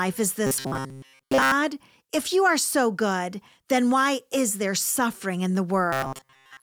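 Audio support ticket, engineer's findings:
Robotic sound from repeated short buffers, 0.47–1.52 s and 5.93 s to end. Symptom: rigid metallic buzz at 133 Hz. Likely cause: audio arriving too seldom, playback layer looping the last ~7.5 ms block, which fits the 133 Hz rate, while real audio is dropped. Roughly two thirds or more of the audio in both spans replaced by repeats. Check buffer underruns and delivery timing upstream.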